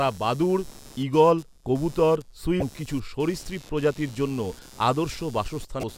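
A speech clip with a computer activity noise buzz throughout, pulsing around 100 times a second and roughly 25 dB below the voice. The processor and peripheral load disturbs the audio ground, which shows as faint evenly spaced vertical ticks across the spectrogram. There are two short glitches from damaged data in a compressed stream, at 2.59 to 2.62 s, between "বাদুড় ঈগল কবুতর" and "কিছু সরীসৃপ প্রজাতির জন্য", and at 5.80 to 5.84 s. At each one the decoder misreads corrupted frames and resyncs, leaving a brief broadband smear or a waveform discontinuity.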